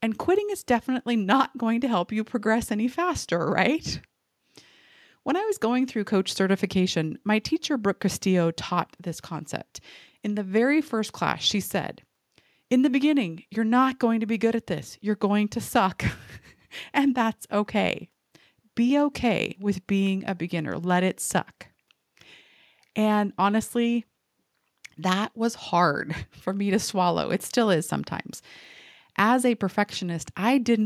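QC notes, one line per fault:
No faults found in the speech recording. Nothing here calls for a QC note.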